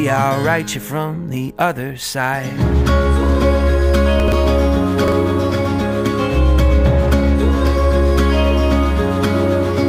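At 4.2 s, chunks play out of order for about 0.12 s. A 40 ms chunk arrived late and plays after the two that should follow it. The sound jumbles briefly. At 5.04 s, a 40 ms chunk plays one place late, producing a shorter garbled moment.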